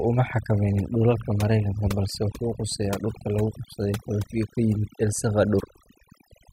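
From the first moment to the last, the speech carries overdone noise removal. The denoiser was pushed too hard, so any frequency band sitting near its noise estimate gets clamped down or shut off, and the softer parts of the voice get dragged under along with the noise. What's left is a background of near silence sprinkled with twinkly little specks.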